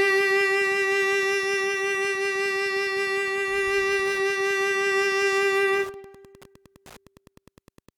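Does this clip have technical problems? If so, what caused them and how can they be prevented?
Yes. A steady ticking, close to ten clicks a second at about 30 dB below the music, runs through the whole clip. This is Wi-Fi interference: a nearby radio's beacon, repeating every 102.4 ms, is picked up and rectified by the audio circuit. Keep routers and phones away from the audio gear and use shielded cables.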